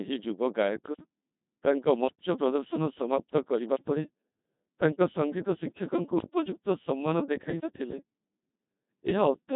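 From start to finish, the speech passes through a Codec 2 vocoder. Heavy damage is audible, and the density of the artefacts fits a 2.4 kbit/s mode. The waveform is never carried. Only pitch, voicing, energy and a coarse spectral outline are sent. The decoder then rebuilds the voice from sine waves. The result sounds robotic and buzzy, with a flat, synthetic timbre. Nothing is present above 3.8 kHz, so the sound is also dull and narrow.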